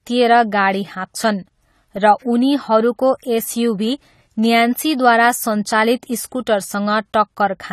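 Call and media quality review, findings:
AAC compression artefacts throughout the speech. Dull, smeared tone. Warbling, fizzy texture on sustained sounds and sibilants. Nothing above 14 kHz. Likely low-bitrate AAC-LC, consistent with about 32 kbps. Coarse quantisation thins the spectrum and fills bands with substitute noise.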